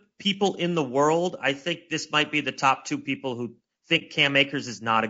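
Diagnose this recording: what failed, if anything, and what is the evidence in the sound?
Throughout the speech the sound is rough and grainy, with noise filling the gaps between harmonics and a thin, slightly synthetic top band. This is codec-stage damage, most likely from low-delay AAC compression (AAC-ELD), whose short frames resolve pitch poorly at a bitrate that sounds around 32 kbps.

From 3.98 to 4.03 s the sound fades softly into a brief silence and back out, with no click. This is AAC frame loss with muting, in the network or transport stage. The decoder zeroed a missing frame's spectrum, and the overlapping windows smoothed the edges. The gap's length fits a single lost frame.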